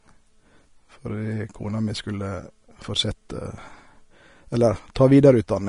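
From start to finish the speech is dull and grainy. Nothing is heard above 10.5 kHz. The treble that remains sounds hissy rather than clear. Consonants smear and lose their edges. The likely cause is Vorbis compression at a low setting, which fits a bitrate of around 33 kbps. At that rate the codec cuts the top band and codes the upper detail so coarsely that it turns into noise. The damage is plainly audible throughout.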